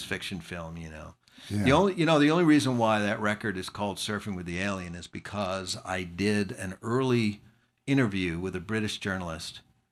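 From 4.50 to 5.73 s, just before "I did an early", the speech dulls and turns gritty: a Bluetooth SBC bit pool drop, consistent with a fall from about 28 to 11 and roughly 90 kbps. Unlike a clean low-pass, starved sub-bands add coarse quantisation grain, without dropouts.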